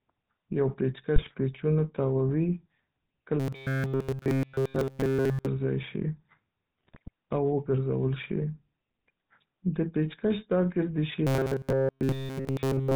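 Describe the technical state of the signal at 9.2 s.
At 9.2 s the speech carries GSM full-rate codec damage, present throughout: coarse pulse-excited coding gives a buzzy, gravelly roughness, and a spectrogram shows a hard ceiling at 4 kHz.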